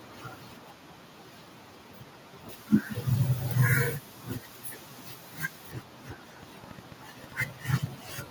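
From 2.49 to 5.72 s the treble boost applied before recording or transmission was never undone, so pre-emphasis is left on. The response matches a 50 µs FM curve, lifting 10 kHz about 10 dB above 1 kHz, and the speech turns thin, bright and hissy on sibilants.

From 6.43 to 8.10 s a train of clicks appears, likely from interference by nearby equipment or a faulty connection or power supply injecting pulses. Roughly ten similar clicks arrive unevenly, about 6.6 per second, peaking about 5 dB above the speech, heard as ticking over the sound and in pauses.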